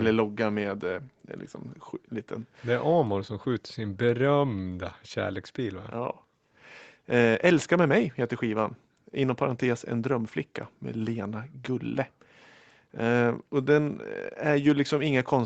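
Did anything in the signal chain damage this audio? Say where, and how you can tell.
No, nothing in the chain damaged this speech. It carries the marks of an ordinary call path: the microphone processing and the Opus codec together leave nothing above 8 kHz, which is the expected bandwidth limit of that path.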